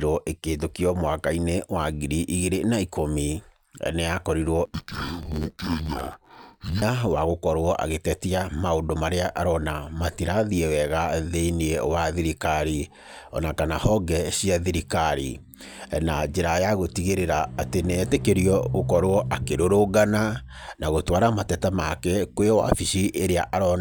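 From 4.65 to 6.82 s, the speech suffers interleaved audio read as planar. Alternating left-right samples in each 10.88 ms block get split into halves and played at half speed. The blocks are short, so the sound turns dull and robotic, buzzing near 92 Hz without an obvious octave drop.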